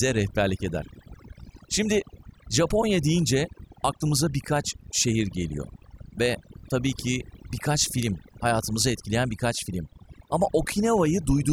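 Overdone noise removal runs throughout the speech. Bands near the noise estimate are cut hard. The background breaks into twinkling, warbling specks, and quiet speech parts vanish.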